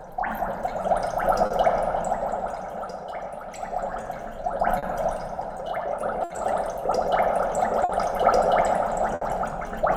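A recording of everyday sound, carried over a link where the sender's audio clock runs slow against the receiver's, by something like 4 percent, so the receiver's jitter buffer keeps draining. This clock drift between sender and receiver is present for the whole clip. To stay in step, the receiver makes repeated timing corrections from 0.08 to 7.63 s. It keeps repeating short slices of audio, all in the same direction and at uneven spacing, so the material plays at about 98 percent speed and gains roughly 150 ms over that stretch. Each insertion is tiny, so the effect is a faintly unsteady, dragging pace with occasional small hiccups rather than any obvious break. Sometimes the buffer empties completely before the next packet arrives, giving a short stall from a late packet. There are five of these: 1.46 to 1.52 s, filled for 40 ms; 4.79 to 4.85 s, 40 ms; 6.24 to 6.32 s, 60 ms; 7.84 to 7.91 s, 50 ms; and 9.15 to 9.23 s, 60 ms. 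At each one the receiver holds the last sound until the packet arrives, then resumes exactly where it left off. Nothing is lost, but the sound briefly hangs, with a slight buzz or dip, and the delay grows by the length of each fill.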